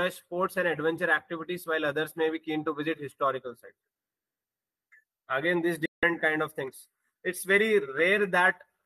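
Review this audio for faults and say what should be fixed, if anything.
A digital broadcast dropout runs from 5.86 to 6.03 s. The receiver fades out in 3 ms and mutes for 168 ms, which fits about seven lost frames, then the sound returns. More signal margin or stronger error protection on the link should keep frames from failing like that.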